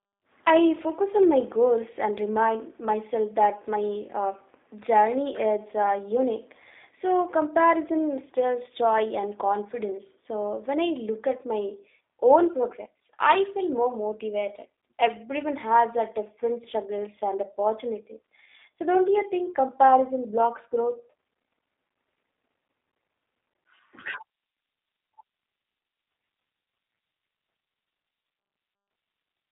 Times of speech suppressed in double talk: none

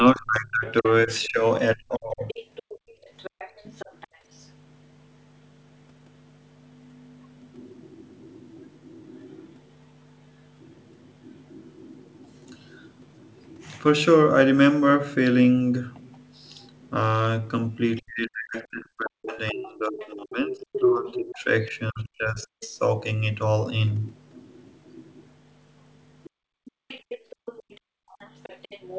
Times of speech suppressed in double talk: 0.00-2.33, 18.01-22.76

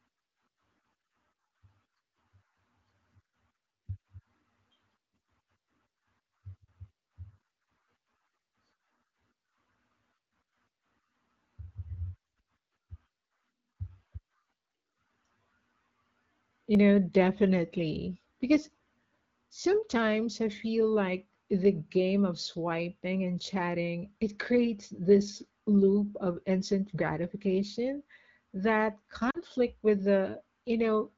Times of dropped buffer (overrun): 16.75

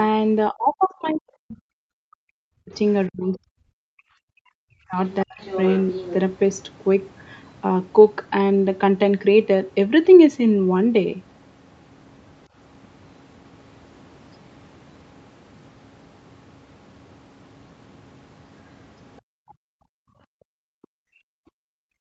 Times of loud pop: none

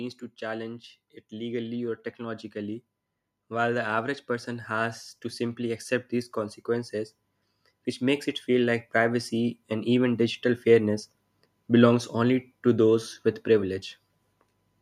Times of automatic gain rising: 0.39-2.83, 3.35-7.21, 7.98-10.48

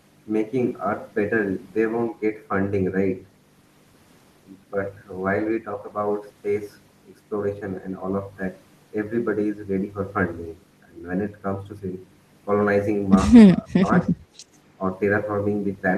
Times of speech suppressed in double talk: 13.62-14.12

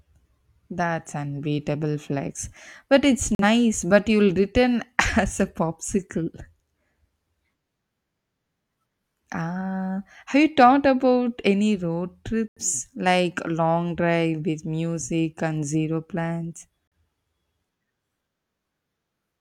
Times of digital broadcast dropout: 3.35-3.44, 12.48-12.61, 16.87-16.92

